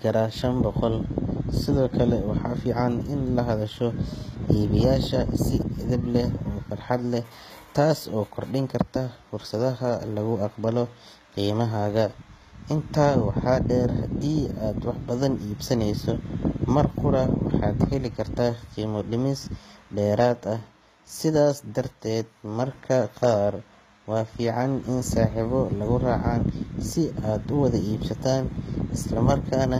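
Throughout the speech, the top end sounds synthetic, with s sounds turning gritty, lispy and metallic and nothing above about 14.9 kHz. The likely cause is HE-AAC compression, rebuilding the treble from copied lower bands, at a rate consistent with roughly 20 kbps.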